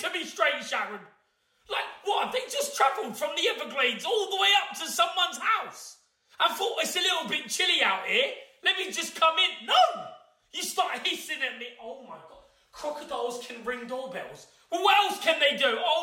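No technical faults can be heard in the recording at any point.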